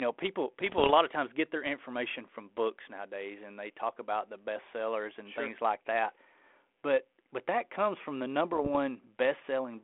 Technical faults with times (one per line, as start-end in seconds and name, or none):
0.66-0.91 bit errors on an ADPCM link
8.53-8.76 bit errors on an ADPCM link